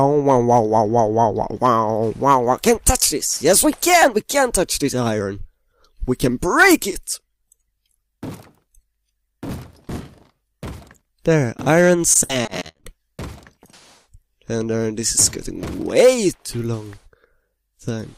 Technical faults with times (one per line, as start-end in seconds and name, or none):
12.13-12.85 repeated packet loss (robotic sound)